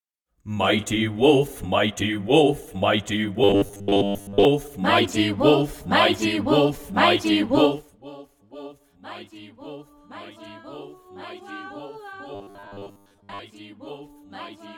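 From 3.44 to 4.45 s, and again from 12.35 to 13.39 s, the sound turns into a rigid, metallic buzz at 100 Hz. This is robotic sound from repeated short buffers, likely about 10 ms chunks replayed while most real audio was skipped.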